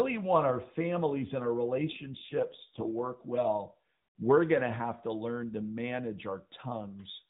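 From 1.78 to 2.96 s there is an AMR rate drop. The speech turns rougher and buzzier, which fits AMR-NB falling from about 12.2 to 4.75 kbps.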